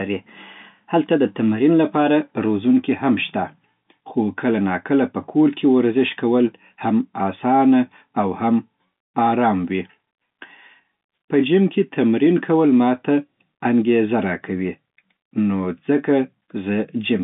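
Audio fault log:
No faults are present in the speech. The G.711 telephone coding keeps the sound within a line band of 150 Hz to 3.6 kHz, with nothing above 3.8 kHz.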